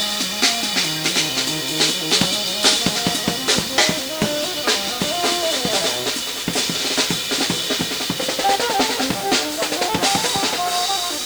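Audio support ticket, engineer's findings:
Low bit depth without dither, whole clip. Grainy distortion that tracks the sound and changes with it. Error sits only about 15 dB below the signal. Likely cause: rounding to roughly 5 bits with no dither.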